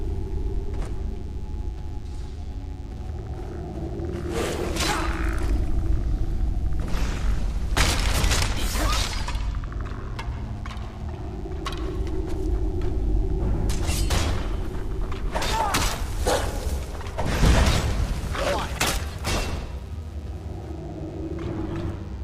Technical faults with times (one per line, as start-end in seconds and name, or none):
0.00-22.24 DECT cordless phone buzz